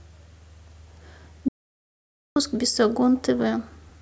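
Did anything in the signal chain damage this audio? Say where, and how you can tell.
Yes. An audio dropout to silence runs from 1.48 to 2.36 s. The speech cuts to silence, no room tone, likely from lost input upstream of the recorder.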